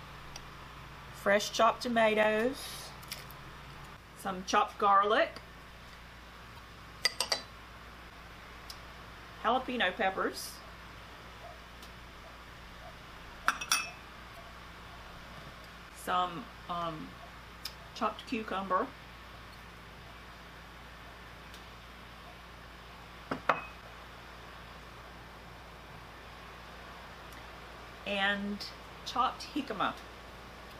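At 6.55 to 6.59 s a short blip cuts through the sound. It is damaged data in a compressed stream. Bytes in the coded stream are wrong. The decoder misreads those frames, loses sync and hunts for the next frame header. The same fault returns at 10.20 s, 14.33 to 14.37 s, 19.50 to 19.55 s and 30.68 to 30.73 s. Each lasts about 40 ms or less.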